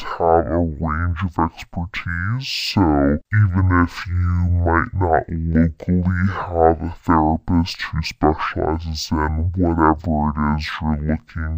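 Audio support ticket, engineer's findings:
Stereo read as mono, whole clip: speech at half speed, one octave low. Interleaved L/R samples decoded as single channel. Spectrogram shows faint mirrored copy in upper half.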